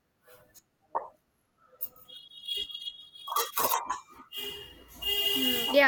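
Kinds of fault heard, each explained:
Nothing stood out on listening to this speech recording.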